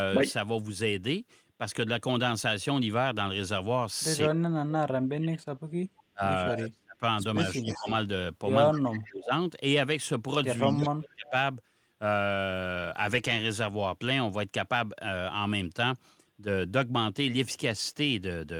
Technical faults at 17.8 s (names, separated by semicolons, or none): none